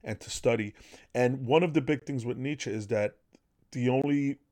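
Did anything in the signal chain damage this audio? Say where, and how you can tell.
Yes. The speech has two short holes, one at 2.00 to 2.02 s between "one of the" and "things with", and another at 4.02 to 4.04 s. Each lasts 20 ms and they fall 2.02 s apart. This is a gap between chunks at the storage or playback stage. The audio was handled in 2-second blocks, and silence was inserted at each join, so the sound is interrupted there but nothing is lost.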